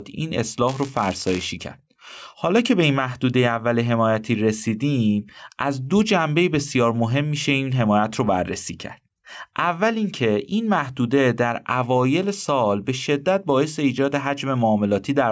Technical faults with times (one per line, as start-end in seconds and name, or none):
0.00-15.31 gain pumping
0.67-1.48 buffer tearing